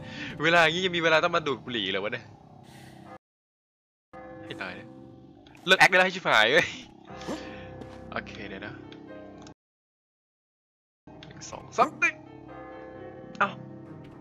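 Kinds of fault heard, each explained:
Playback stall: The player most likely ran short of buffered data, or its output thread was held up, so nothing reached the output until it recovered. The sound cuts off in mid-flow and silence fills the gap, first from 3.17 to 4.14 s, close to a second, then from 9.52 to 11.07 s, about 1.55 s. Each time the audio resumes rather than simply ending.
Time-compressed catch-up: After each stall the player works off its backlog by dropping short slices of audio and cross-fading across the joins, so playback runs faster at unchanged pitch. From 4.14 to 6.06 s the sound moves at 1.5 times normal speed, hurried. From 11.07 to 14.07 s the rate is 1.1 times, a gentler push.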